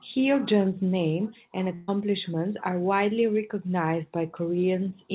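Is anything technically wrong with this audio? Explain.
Yes. A burst of packet loss hits from 1.74 to 1.90 s. Several packets in a row never arrived in time. The receiver stretched the last sound for about 137 ms, fading it as a held buzz or hiss. Then the speech jumps ahead, with roughly 140 ms gone. Over the call path, everything above 4 kHz is missing, which fits a G.711 narrowband codec.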